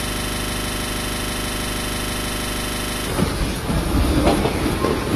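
From the very first instant, already under way when the audio begins, a system hang loop holds until 3.07 s. The playback path stopped receiving fresh data while the output hardware kept reading the same 40 ms stretch of its ring buffer, so that one fragment repeats exactly, dozens of times over. At a repeat rate of 25 Hz it comes across as a rough, rapid stutter bordering on a buzz, with no forward movement in the sound until the loop releases at 3.07 s.

Throughout the whole clip the sound is dull and smeared, with nothing present above 12.6 kHz and a grainy, warbling texture on sustained and noisy parts. The damage is plainly audible and points to a likely cause in AAC compression, AAC-LC at a low rate that fits about 32 kbps. The encoder dropped the top band and coded the remaining spectrum coarsely, leaving smear where detail should be.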